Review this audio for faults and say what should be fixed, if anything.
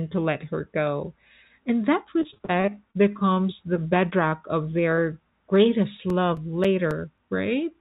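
From 2.20 to 2.96 s there is repeated packet loss (robotic sound): a rapid run of gaps up to 35 ms, about a quarter concealed, giving choppy speech with pieces missing. Short concealed packet loss occurs at 3.34–3.38, 4.10–4.14, 4.30–4.34 and 4.96–5.00 s. Each 20 ms hole is patched by extending the preceding sound, which produces a brief smear. CD scratch ticks run from 5.56 to 7.18 s as seven periodic clicks, the longest about 7 ms, where a disc blemish defeated error correction once per revolution. All of this sits on a call path band-limited at 4 kHz, consistent with G.711. To prevent it, stabilise the network link or enlarge the jitter buffer, and rip the source from an undamaged disc with a secure-read ripper.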